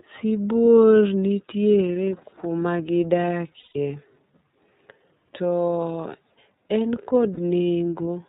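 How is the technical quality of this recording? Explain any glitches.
The recording has audible technical problems: codec coloring throughout and two short dropouts.

iLBC codec, throughout the 8-second speech clip: the audio passed through a narrowband VoIP codec that encodes each frame's excitation independently, and the 30 ms frame pacing and rate fit iLBC at 13.33 kbps. The damage is plain. Nothing above 4 kHz survives, so the speech is muffled and band-limited. The encoding also leaves a rough, slightly synthetic edge on the speech.

Lost iLBC frames, at 3.59 to 3.76 s and at 7.34 to 7.39 s: packets went missing, and the decoder filled each gap by repeating the last pitch cycle blended with noise. The first gap is about 150 ms, which fits five lost 30 ms frames, and it comes through as a held, buzzy vowel that fades. The second is a single 30 ms frame and is only a brief held vowel. 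Because iLBC frames stand alone, normal speech returns almost immediately after each gap.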